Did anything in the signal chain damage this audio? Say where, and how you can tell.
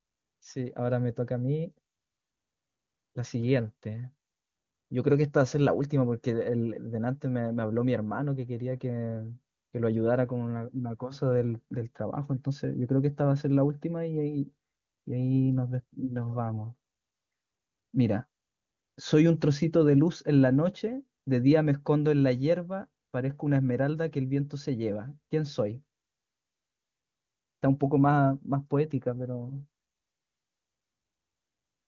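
No, nothing in the chain damaged this speech; the band stops at about 7.2 kHz, as expected from an AMR wideband (HD Voice) link at 23.85 kbit/s, its top rate, and any trace that codec leaves is faint at most.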